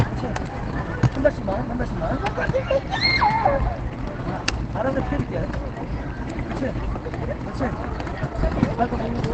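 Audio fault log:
Throughout, Opus compression: the sound is muffled and hoarse, with plainly audible codec damage and nothing above 8.6 kHz. This is likely Opus in its SILK speech mode at wideband, which fits a bitrate near 16 kbps, giving up bandwidth and texture to save bits.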